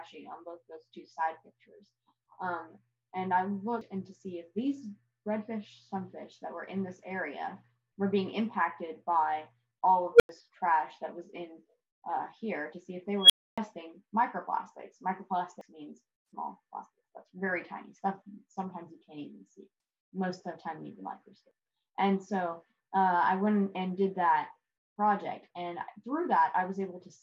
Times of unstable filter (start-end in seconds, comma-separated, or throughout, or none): 10.14-10.29, 13.21-13.58